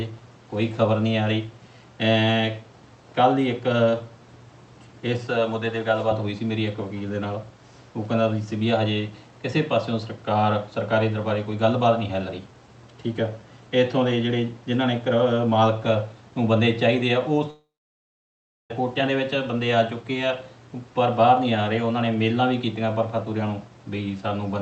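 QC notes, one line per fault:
17.50–18.71 s, long network dropout. About 1.2 s of audio is missing. The last sound is stretched into a brief fading buzz, then roughly a second of near silence follows. Playback resumes further on with the lost section skipped, not delayed. The likely cause is a run of lost packets that the receiver's concealment tried to bridge before it gave up. The call codec's band limit is audible around it, with nothing above about 8 kHz.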